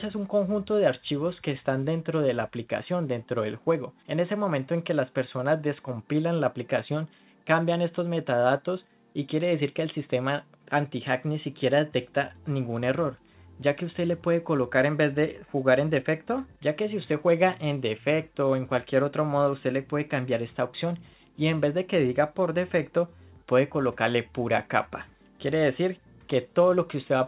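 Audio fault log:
No faults found anywhere in this audio.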